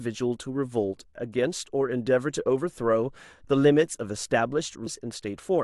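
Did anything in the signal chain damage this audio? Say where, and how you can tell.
Yes. The damage sits at the codec stage, in the compressed data itself: damaged data in a compressed stream produces a brief disruption at 4.86 s, near the end of the clip. When bytes in the compressed file or stream are corrupted, the decoder misreads the affected frame, loses sync and must hunt for the next valid frame header. The glitch during that resynchronisation is the short disruption heard here, lasting about 16 ms.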